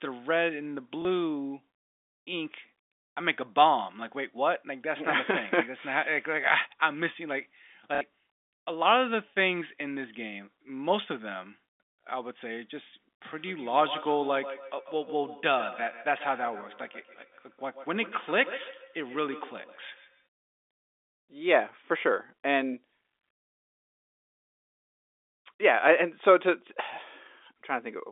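Packet loss with last packet repeated, at 1.02 s (30 ms) and 7.95 s (60 ms): the receiver replays the previous packet, producing a small blip for the single lost packet and a short robotic stutter for the two-packet run. Feedback echo between two devices, 13.35 to 20.28 s: another device's playback re-enters a microphone, so speech returns roughly every 150 ms, thin and ringing, about 16 dB below.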